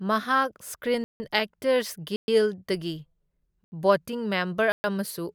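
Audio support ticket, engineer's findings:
Block of digital silence, four times in the speech: 1.04–1.20 s (160 ms), 2.16–2.28 s (120 ms), 3.64–3.72 s (80 ms), 4.72–4.84 s (120 ms). Hard cut to silence and back, heard as short holes. Probable component: output buffer not filled in time. Lengths in 40 ms steps fit whole buffers being missed. No fade and no filled-in noise, so this is not a gated dropout or a concealed packet loss.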